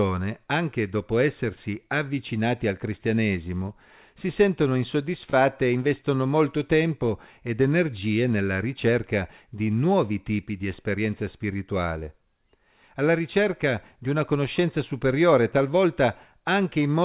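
At 5.30 to 5.35 s and again at 6.01 to 6.05 s, a late packet left the jitter buffer empty, causing a short stall from a late packet: the receiver stretched the last speech sound by about 29 ms, then 22 ms, before resuming. Nothing is lost, but each sound lingers slightly too long with a slight buzz or dip, against a band that stops at 4 kHz, which fits a G.711 call codec.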